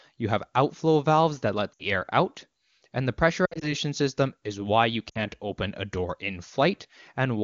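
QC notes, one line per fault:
1.74–1.84 s: lost AMR speech frames. About 60 ms of sound is concealed by repeating the last pitch and vocal tract settings at falling gain, which fits three dropped 20 ms frames and gives a short dip toward near silence.
3.45–3.74 s: lost AMR speech frames. Losses are scattered across 160 ms, 100 ms in total, with the longest gap 60 ms. Each gap is concealed separately, giving repeated warbles and dips, and the sound comes back weak or rough after each.
5.09–5.23 s: lost AMR speech frames. About 60 ms is concealed with the same falling-gain repetition, giving a brief dip toward near silence. The clear wideband sound on either side fits AMR-WB at its top 23.85 kbit/s rate.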